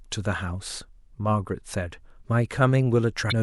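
A brief glitch breaks into the speech from 3.28 to 3.33 s, caused by damaged data in the compressed stream that made the decoder lose frame sync.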